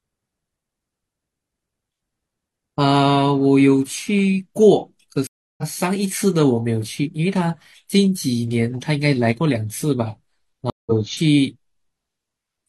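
At 5.27 s the speech drops out for 310 ms, a stream reconnect. The player lost its connection and restarted decoding mid-stream. Speech resumes about 0.3 s further on, fading in. At 10.70 s it recurs: 167 ms of silence, skipping about 0.15 s.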